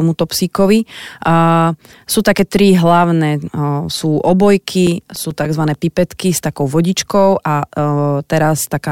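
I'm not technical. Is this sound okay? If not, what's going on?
No. CD scratch ticks appear from 4.72 to 5.74 s: eight quick ticks in the speech, about eight a second, each only a few milliseconds long. A mark on the disc spoils the data once per spin, so the player patches or silences those tiny moments.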